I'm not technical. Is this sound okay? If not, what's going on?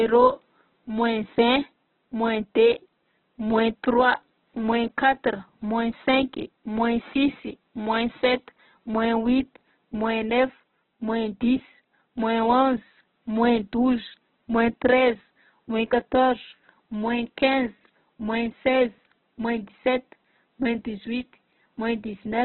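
No. Throughout the clip, the speech sounds thin, muffled and grainy, with rough edges. Nothing above about 4.1 kHz comes through, so crisp detail is gone. This is likely heavy Opus compression, squeezing the sound into a very small file. The faint room noise is natural.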